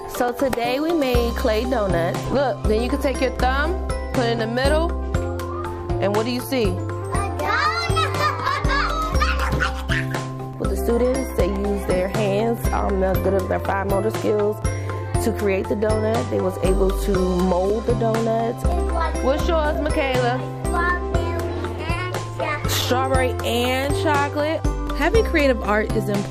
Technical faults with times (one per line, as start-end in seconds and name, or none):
0.28-25.90 periodic USB or driver dropouts